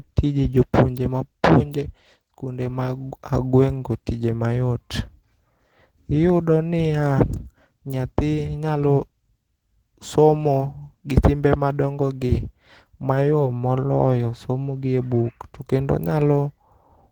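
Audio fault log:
Throughout, Opus compression. The speech sounds hoarse, grainy and somewhat muffled, and the damage is plainly audible. Content still reaches 20.2 kHz. The likely cause is Opus in its hybrid speech mode at a rate that fits 16 kbps, filling starved bands with noise.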